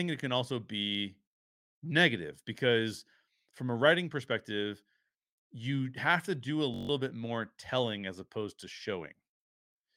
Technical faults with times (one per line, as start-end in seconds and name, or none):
6.74-6.89 system hang loop